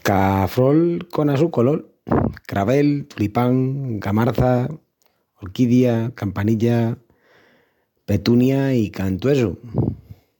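No technical faults can be heard anywhere in the recording; the speech signal stays continuous and stable throughout, with nothing in it pointing to a problem in capture, processing or transmission.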